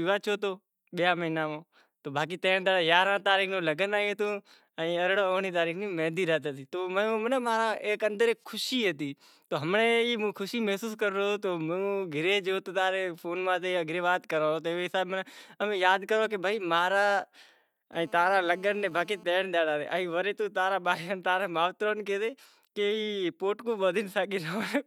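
From 17.93 to 19.24 s, GSM phone buzz cuts across the speech: a nearby 2G phone on a call bursts 217 times a second, which the audio circuit rectifies into a steady raspy buzz about 27 dB below the speech. On a spectrogram it shows as evenly stacked horizontal lines at 217 Hz and its harmonics, and the waveform carries a regular pulse train.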